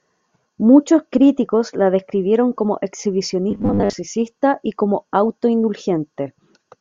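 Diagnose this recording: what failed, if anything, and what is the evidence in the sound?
The driver or buffer stage failed, which is likely the cause. From 3.51 to 3.94 s the speech becomes robotic sound from repeated short buffers. A rigid, metallic buzz at 100 Hz rides over it. That fits one 10 ms slice being replayed while most new audio is skipped.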